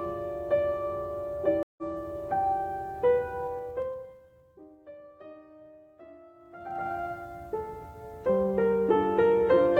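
A music clip with two kinds of fault. At 1.63 s a stream reconnect cuts the sound for 148 ms, and playback resumes about a tenth of a second further into the music after a fresh decoder restarts mid-stream. This shows as a flat gap in the waveform and a blank vertical band on a spectrogram, followed by a discontinuity. From 3.42 to 4.82 s the level falls by roughly 25 dB, and from 6.34 to 6.94 s it climbs back by roughly the same amount. Both moves are made in unsmoothed 2 dB steps, about ten per second on the way down and twenty per second on the way up, so each step clicks and produces audible zipper noise. On the waveform the envelope descends and rises as a staircase, and a spectrogram shows faint broadband vertical ticks at every step.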